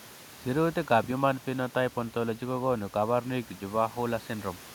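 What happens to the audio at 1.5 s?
Nothing goes wrong at 1.5 s: the speech carries on intact, with only the room noise sitting about 24 dB beneath it, which belongs to the recording space rather than to any fault.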